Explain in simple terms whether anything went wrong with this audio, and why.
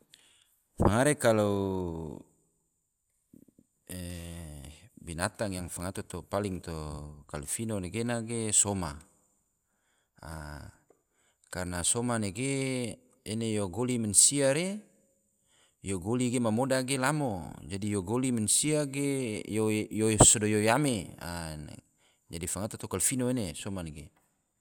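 Damaged data in a compressed stream shows up at 6.59 to 6.62 seconds, right after "binatang yang fangato." For about three hundredths of a second you hear a brief chirp or blip. A small stretch of the compressed file was corrupted there, so the player couldn't make sense of those bits. It lost its place and jumped ahead to the next readable chunk before carrying on.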